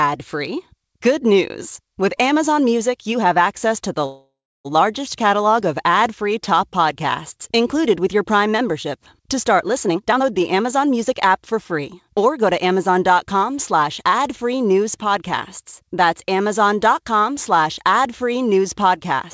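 Call audio freeze, 4.06 to 4.67 s: right after "have access to the", the speech stops and the last sound trails on as a fading buzz or hiss, then about 0.31 s of silence before "largest catalog of" resumes. The likely cause is delayed packets draining the jitter buffer, so the receiver stretched the final sound to cover the wait. Nothing is lost. Instead about 0.59 s of gap is inserted and the speech runs that much later afterwards.

Jitter buffer speed-up, 9.84 to 14.18 s: the speech leading into "free news podcasts" sounds hurried, running at about 113% of normal speed while the pitch stays put. The buffer had built up more audio than it wanted, so the receiver trimmed out many tiny pitch-period-length slices in quick succession, roughly half a second in total, to pull the delay back down. Through all of this the band stops at 8 kHz, which fits a G.722 call path at 64 kbps.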